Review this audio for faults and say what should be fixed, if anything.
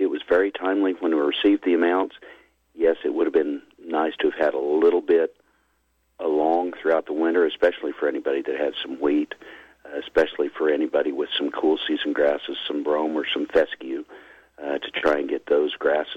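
Nothing needs fixing, as the signal comes through intact, with steady level and continuous playback throughout.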